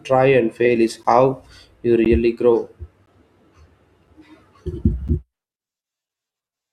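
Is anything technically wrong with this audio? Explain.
Yes, there's a gap between stream segments, six times: at 1.03 s (right after "fail is"), 2.05, 3.06, 4.07, 5.08 and 6.09 s. Each is a hard-edged dropout of silence, about 6 to 14 ms long, landing once a second, which fits 1-second segments whose time stamps don't quite butt together. The player pads the gap with silence, so nothing is lost; the speech just gets a tiny, regular stutter.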